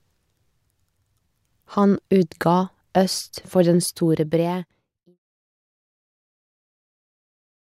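Nothing here counts as a technical fault; the level simply eases down in an ordinary editor's fade-out that begins around three and a half seconds in and reaches silence by 5.19 s.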